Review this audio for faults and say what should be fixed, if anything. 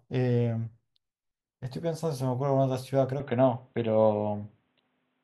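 From 3.2 s to the end, the speech turns dull and boxy. Nothing above 4 kHz survives. The level shifts by about 5 dB. A faint new noise floor appears, with no gap at the change. This is likely an input switched to a poorer, narrower-band device. Lock the recording input so the system cannot change devices mid-session.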